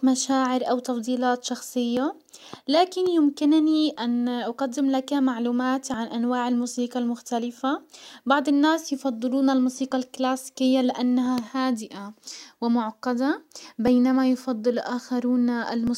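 From 1.97 s, just after "او تفضيلات", to 15.87 s, periodic USB or driver dropouts skip roughly 10 ms of speech about every 1.99 s, producing regular ticks. A waveform shows abrupt splices, and a spectrogram shows evenly spaced thin vertical broadband lines.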